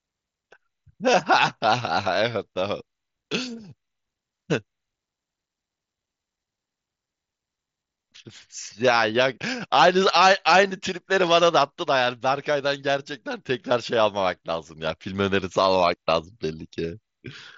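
The speech comes over a Bluetooth mSBC headset link, with the wideband top end near 8 kHz and the light codec texture that path leaves on louder moments, and nothing else in the signal stands out technically.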